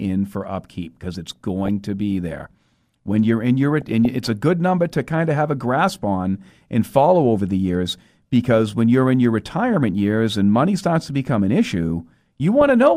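Speech clip with DAB burbling: bit errors slip past error correction into the MP2 data, putting short blips of noise in sub-bands at 1.26–1.68 s, 3.81–4.05 s and 12.61–12.70 s.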